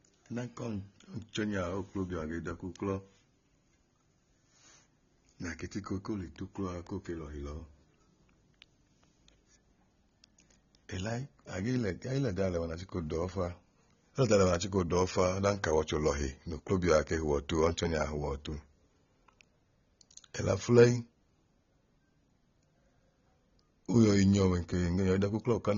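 From start to finish the speech sounds dull and smeared, with nothing above about 7 kHz, and sibilants go fizzy: likely AAC compression at a low bitrate, around 24 kbps.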